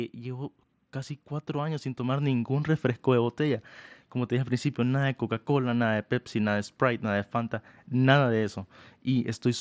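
Automatic gain rising affects this speech clip. The automatic gain control judged the input too quiet and pushed its gain up steadily from 0.16 s to 4.61 s, by about 9 dB in total. The voice and the background noise beneath it swell together over those four and a half seconds. The level climbs instead of holding steady. The audio stops at 8 kHz, with a light grain on louder sounds, which fits a wideband Bluetooth headset link.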